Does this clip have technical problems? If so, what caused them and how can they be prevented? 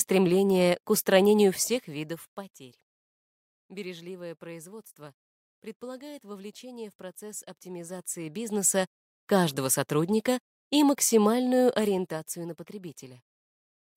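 Yes. Zipper noise at 1.49–2.69 s, 7.62–9.01 s and 11.61–12.54 s: gain jumps in unsmoothed 1 dB steps, about ten per second, each clicking. The waveform shows a staircase envelope; the spectrogram shows faint vertical lines. Ramping gain changes per sample prevents it.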